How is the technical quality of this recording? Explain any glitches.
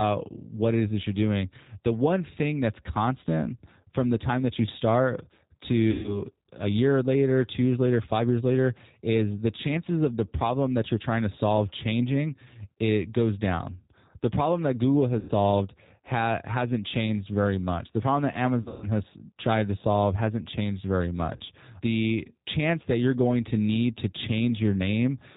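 The technical quality is limited: the whole recording carries narrowband low-bitrate codec coloration, and four brief dropouts were patched over by the decoder.

The G.729 codec, here at 8 kbit/s, runs throughout. It models speech as a vocal tract filter driven by a pitch predictor and a few pulses per short frame, so nothing above 4 kHz survives. The result is plainly audible: a muffled, telephone-band sound with a rough, slightly synthetic edge on the voice.

VoIP packet loss concealed by the speech codec occurs at 5.91–6.22 s (120 ms lost), 15.19–15.31 s (100 ms), 18.62–18.87 s (180 ms scattered over 200 ms, longest run 140 ms) and 21.36–21.42 s (40 ms). The lengths fit runs of 20 ms packets. During each gap the decoder extends its last pitch and filter state at falling gain. This produces a buzzy or noisy, fading smear, and the voice stays weak or distorted briefly after the audio resumes.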